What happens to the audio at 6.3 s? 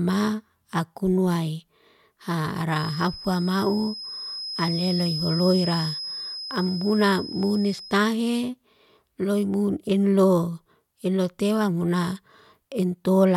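At 6.3 s a thin, steady whistle near 5.1 kHz sits roughly 10 dB beneath the speech, swelling and fading slowly in level, from 2.67 s to 8.03 s. This feedback whistle is likely a loudspeaker-to-microphone loop held just at the edge of runaway.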